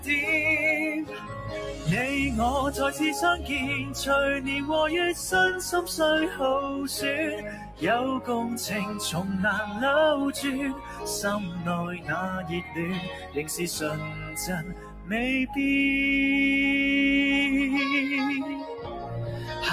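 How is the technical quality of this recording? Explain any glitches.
The recording is compromised by processing rather than clean: a speech-oriented noise suppressor was left running on non-speech sound.

Throughout the clip, this noise suppressor applied to music or sounds treats sustained tones and ambience as noise, so levels pump by around 10 dB. Attacks survive while tails thin, which rules out simple compression.

Sound cut by the noise suppressor is heard at 1.04–1.87 s, 7.37–7.82 s, 10.74–11.04 s, 12.42–13.43 s, 13.98–15.12 s and 18.78–19.52 s. Sustained material sinks by about 6 to 11 dB and decays end early. These are partial dips, not total dropouts.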